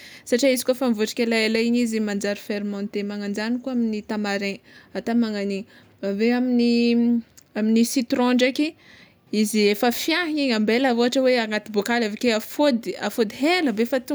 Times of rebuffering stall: none

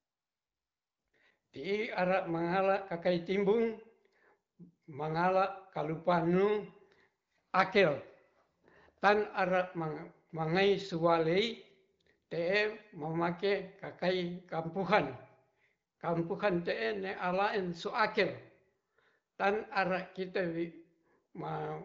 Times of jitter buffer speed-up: none

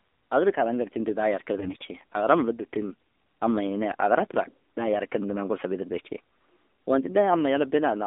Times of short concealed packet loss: none

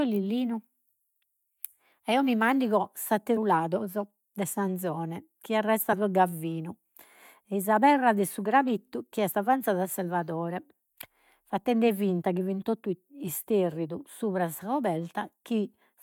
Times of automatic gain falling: none

